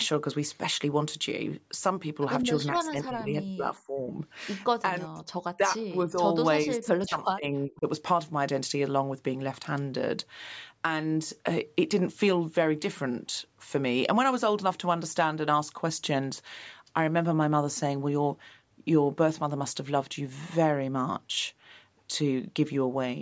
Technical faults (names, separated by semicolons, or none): speech suppressed in double talk